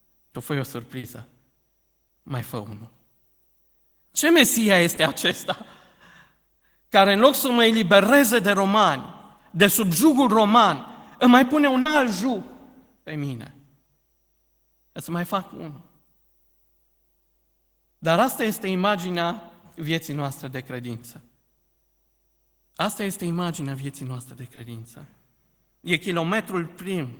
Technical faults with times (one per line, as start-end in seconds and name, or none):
0.99-1.05 short concealed packet loss
2.07-2.11 short concealed packet loss
4.95-4.99 short concealed packet loss
6.59-6.63 short concealed packet loss
11.81-11.87 short concealed packet loss
24.55-24.59 short concealed packet loss